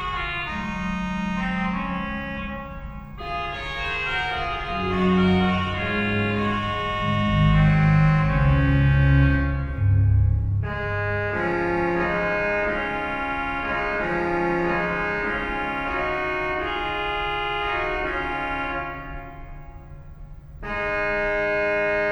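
No technical faults can be heard anywhere in the recording.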